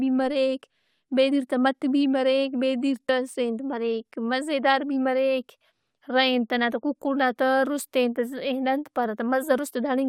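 At 1.31 s, just before "تہ مٹ بھی", and again at 3.08 s, the speech lurches forward, as if a sliver of sound has been snipped out. These are compressed frames skipped: the decoder never played a small run of frames, so the audio jumps ahead by around 40 ms each time, which fits two frames of 21.3 ms.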